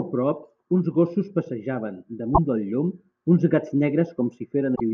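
At 2.31 s the speech breaks into a short burst of damaged data in a compressed stream, lasting until 2.38 s. A second burst follows from 4.72 to 4.81 s. In each spot, part of the compressed data was wrong. The decoder misread those frames and lost sync. It then had to hunt for the next valid frame header. Each event is heard as a brief chirp, squawk, click or short hole, under a tenth of a second long.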